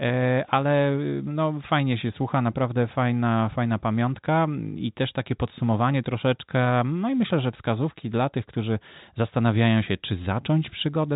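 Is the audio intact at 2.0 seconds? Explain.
Yes, the audio is intact at 2.0 seconds, with no fault at that moment beyond the narrow G.711 telephone band that limits the speech throughout.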